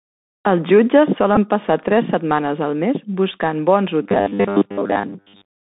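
Throughout, the Bluetooth CVSD headset codec confines the speech to roughly 150 Hz–3.7 kHz, with scratchy sibilants and granular hiss. A spectrogram shows nothing above 4 kHz.

At 1.36 s, a Bluetooth headset packet repeated: about 11.2 ms of lost audio, which fits three 3.75 ms packets, was replaced by re-decoded bits, giving a brief buzzy tick and a short striped smear on the spectrogram.

From 4.03 s to 5.73 s, the speech becomes a rigid metallic buzz at 100 Hz. This is likely robotic sound from repeated short buffers of about 10 ms. Most of the audio is replaced, and the waveform shows identical repeating cycles.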